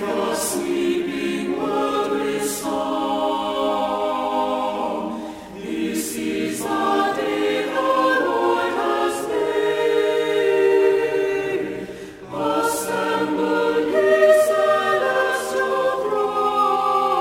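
Throughout, crude rate conversion drops samples without filtering, which fits a 48 kHz to 44.1 kHz change, leaving an inharmonic fizz about 25 dB down.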